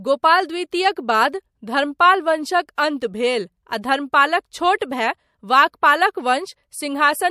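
Pre-echo appears three times, at 2.75 to 2.78 s, at 3.82 s, and at 4.79 to 4.81 s. Before each sharp onset, a short hiss rises about 17 to 23 dB above the floor for 19 to 26 ms, and the attack sounds softened. The codec spread its quantisation noise across a long block, which fits a window of roughly 36 ms with no switch to short blocks. On a spectrogram, broadband smudges sit just ahead of each onset. The waveform shows a thickened floor there.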